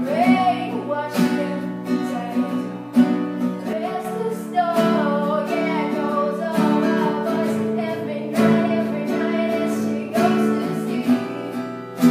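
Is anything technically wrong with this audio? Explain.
Yes. From 3.73 to 4.05 s the level abruptly falls about 6 dB, likely one channel drops out of the mono sum; it dips rather than going silent.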